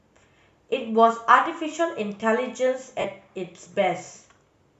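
At 3.00 s the speech hits a short patch of lost LE Audio frames, running about 37.5 ms to 3.05 s, which fits five 7.5 ms frames dropping out over the Bluetooth link. The decoder, likely LC3, covers the gap by replaying the last spectrum it had with randomised signs and easing it down. Instead of a clean silence, you get a brief hissy, smeared blur where the sound should continue.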